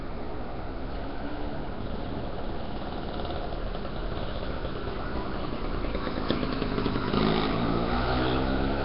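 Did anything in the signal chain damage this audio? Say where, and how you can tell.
Yes, at the codec stage, throughout. The audio carries a rough, hissy halo and a smeared, watery texture, with nothing above about 5.3 kHz. This is likely Nellymoser compression, with heavy damage consistent with a rate near 22 kbps: starved bands receive no bits and are refilled with noise.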